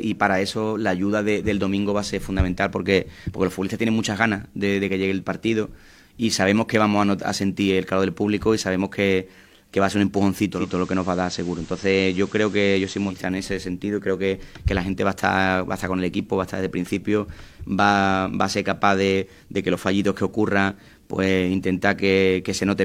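At 10.50 s there's a digital radio blend to analogue: the receiver loses the digital stream and cross-fades over about a quarter second to the station's FM feed. Hiss rises, roughly 25 dB down, until it blends back at 13.26 s.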